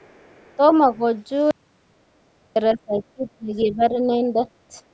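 From the start to 0.74 s a faint second voice sits far beneath the talker, very low in level, which points to the other side's voice leaking through: the far end likely played on a loudspeaker and the echo canceller left a residue in the microphone feed. Unlike the suppression that follows, this adds sound rather than taking it away. At 3.62 to 3.66 s a short, clearer scrap of that leak returns, noticeably louder, in the middle of the second suppressed stretch.

Between 0.96 and 1.03 s the talker's level dips slightly for a moment. This is speech suppressed in double talk, likely because the canceller heard both sides at once and turned everything down together. The talker is attenuated but not removed, which separates it from a true gap. The same fault returns far more strongly from 2.74 to 4.39 s. Across roughly a second of that span the voice sinks by a large margin as the canceller clamps down.

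From 1.51 to 2.56 s the audio drops to complete silence for about 1.05 s. This is an audio dropout to silence, with no room tone at all, which suggests silence was likely written while the input was lost. The talker cuts off after the word before the gap and resumes mid-flow, and whatever was said in between is gone.

At 4.86 to 4.92 s the room sound dips by about 9 dB for a brief moment and then comes back. This is background gated by the echo canceller: the microphone is turned down hard while the loudspeaker plays. The dip is partial rather than total, so it is not a dropout to silence. The call's microphone path, which carries nothing above 8 kHz, is normal band-limiting and not part of these faults.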